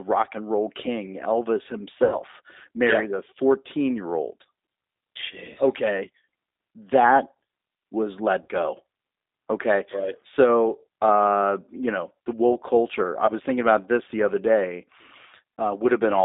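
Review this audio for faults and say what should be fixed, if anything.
G.729 codec: throughout the clip the speech is confined to about 250 Hz to 3.7 kHz and has a rough, slightly synthetic texture. This fits an 8 kbit/s G.729A stream, which rebuilds each 10 ms frame from a vocal tract filter, a pitch predictor and sparse pulses, so fine spectral detail is discarded. To prevent it, carry the call on a wideband codec such as G.722 or Opus end to end.

VoIP packet loss concealed by the speech codec: this occurs at 2.04–2.18 s, 4.43–4.45 s, 8.42–8.49 s, 13.26–13.32 s and 15.58–15.61 s, replacing about 80, 20, 60, 20 and 40 ms of audio. The decoder stretches the last pitch and filter with falling gain, so each gap becomes a short buzzy or noisy smear that fades, and the speech stays weakened briefly afterwards. To prevent it, reduce loss on the network path with QoS marking and add in-band redundancy or FEC.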